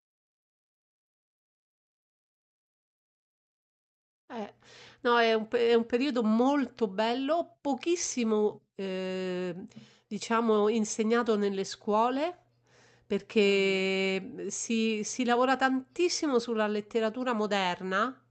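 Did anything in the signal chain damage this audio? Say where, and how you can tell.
No, nothing in the chain damaged this speech; it came through an ordinary WebRTC call path, and the top end rolling off around 8 kHz is just what that call codec's bandwidth setting does.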